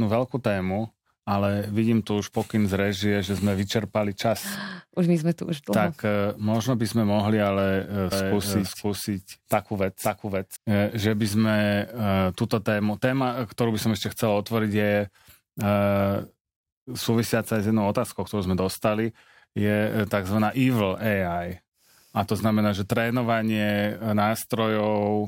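A speech clip with a doubled audio track from 8.12 s to 10.56 s, ending just before "eh že by sme": a second full-band copy trails about half a second behind at roughly equal level, dry and starting and stopping abruptly, likely from a slower second capture path or an edit holding two misaligned copies.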